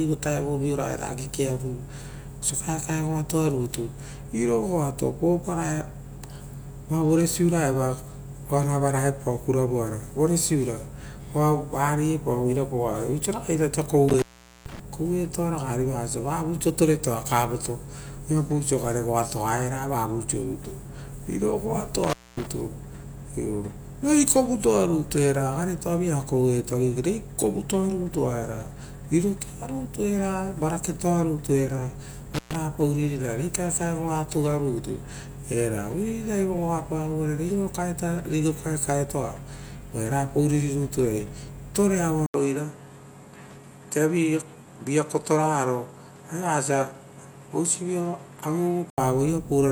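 At 14.09, 22.04 and 32.34 s the speech drops out with crackle at each edge, an intermittent contact where a loose connection opens for about 440, 240 and 120 ms. Faint hiss fills each gap, unlike a clean digital dropout.

From 42.26 to 48.98 s, after an 80 ms silence, the sound turns duller with nothing above 13 kHz and a new noise floor around 35 dB down. The level stays about the same, pointing to a likely input switch to a poorer device rather than an EQ change.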